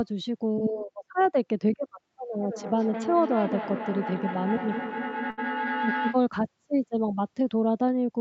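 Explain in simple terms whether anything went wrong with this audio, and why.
A few things did go wrong. Right near the start, around 0.73 to 0.87 s, there's a short concealed packet loss. About 20 ms of the call arrived too late, so the receiver papered over it by stretching the previous sound. You hear a tiny smear or wobble in the speech.

The big one is a feedback howl from about 2.26 s to 6.28 s. Two devices in the same room were on the call, so the sound kept looping from microphone to speaker and back, growing each time. It settles into a tone around 1 kHz that pulses roughly every fifth of a second and gets fairly loud against the speech.

In the middle of that, at about 5.30 to 5.39 s, there's a burst of packet loss. Around 80 ms of audio went missing in a row. The receiver held and faded the last sound to cover the gap, and then the speech picks up again slightly further along, with that bit gone.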